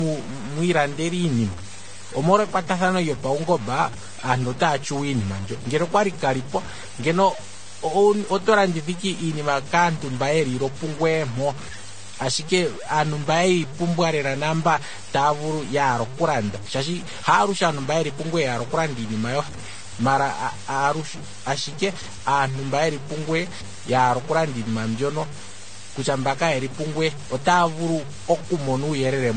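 From start to finish the speech carries a rough, grainy fuzz that tracks the level, with quiet bits turning gritty. That's likely low bit depth without dither, fitting truncation to about 6 bits. Running alongside it, nothing comes through above 9 kHz, and two different smeary, warbly codec textures sit on top of each other. That's likely transcoding between lossy codecs, which fits a low-rate AAC pass followed by Vorbis.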